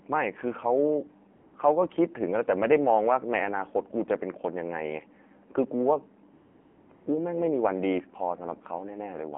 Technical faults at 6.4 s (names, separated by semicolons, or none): AMR narrowband mobile codec; AMR comfort noise